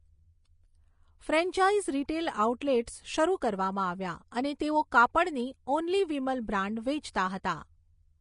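From start to finish the speech has no content above 10.5 kHz, and the upper treble is hissy and grainy, its fine detail replaced by noise-like texture. This points to Vorbis compression, likely at a low bitrate near 33 kbps. Unlike a plain low-pass filter, it roughens what remains below the cut-off.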